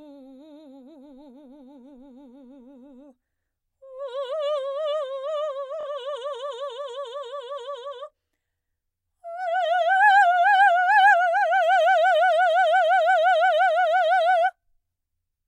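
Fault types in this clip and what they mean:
Bluetooth stutter: music packets arrived late or went missing, so the receiver replayed its last buffered slice to fill the gap. From 5.81 to 5.87 s a brief repeated fragment stutters, then the music resumes about 46 ms further on, consistent with two lost packets.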